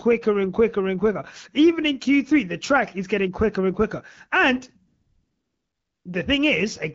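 A speech clip carried over AMR wideband, clear enough to fit a rate around 12.65 kbit/s, with one AMR comfort noise stretch from 4.87 to 6.05 s: the phone stopped sending speech frames for about 1.2 s, and the real background gets swapped for a smooth, steady synthetic hiss that switches in and back out.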